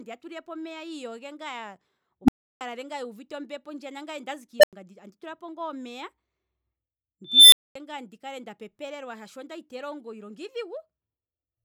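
Speech recording with an unstable filter blowing up three times. At 2.24 s a low tone around 300 Hz swells in about 40 ms, clips hard, then drops out for about 325 ms. At 4.60 s the same thing happens near 700 Hz, building in about 37 ms, with roughly 93 ms of silence. At 7.25 s a squeal around 4 kHz builds more slowly over about 277 ms before a 232 ms gap. That's a recursive filter with bad coefficients feeding on itself until its numbers overflow and it resets.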